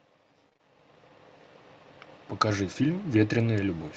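Around 0.49 s there's a run of short concealed packet loss: three consecutive 20 ms chunks, at 0.49, 0.53 and 0.57 s, were missing, and the decoder bridged each by extending the preceding sound. It comes across as a brief smeared wobble until about 0.61 s.

At 2.49 s, a lost packet was rebuilt from error correction. The following packet carried a low-bitrate copy of that 20 ms, which Opus played in its place, so there's no gap, just a moment that sounds rougher and noisier until 2.51 s.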